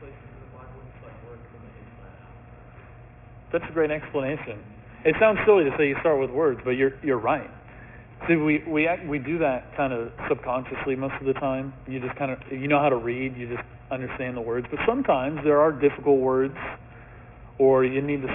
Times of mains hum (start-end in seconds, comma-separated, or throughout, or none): none